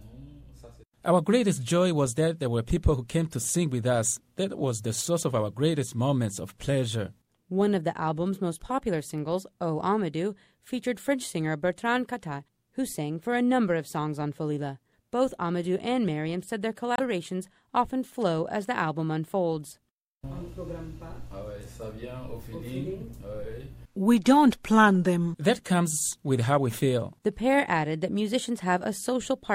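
Damaged data in a compressed stream shows up at 16.94 to 17.00 s as a brief blip of about 54 ms. At that point the encoded data itself is faulty, with bytes lost, zeroed, overwritten or mixed with foreign data. The decoder misreads or rejects the frames it receives there and loses its place in the stream. It then hunts for the next valid frame header before normal playback of the audio can resume.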